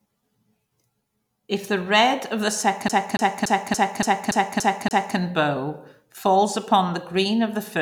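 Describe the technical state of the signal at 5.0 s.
A scratch keeps throwing the laser back one track, so CD stuck on one turn runs from 2.88 to 5.17 s: a 286 ms snippet repeats eight times with brief mutes, a rapid, even stutter.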